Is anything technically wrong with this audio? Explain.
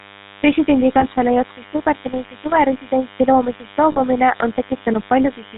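Yes, three problems are audible.

Throughout the clip, a nearby DECT cordless phone buzz is present. The handset or base radiates a burst every 10 ms, and the audio circuitry rectifies it, producing a steady, thin 100 Hz buzz with many harmonics, sitting roughly 25 dB below the speech.

Also throughout, the GSM full-rate codec has plainly damaged the speech. It models the vocal tract and excites it with regularly spaced pulses, discarding most excitation detail, which fits the 13 kbps full-rate scheme. Nothing above 4 kHz survives, and the voice takes on a buzzy, gravelly roughness.

At 1.00 s and 3.92 s, lost GSM frames occur. The receiver covers each gap by repeating the last good frame's settings. That produces a rough, metallic ring, lasting 34 ms at 1.00 s, consistent with one dropped frame, and 62 ms at 3.92 s, suggesting two.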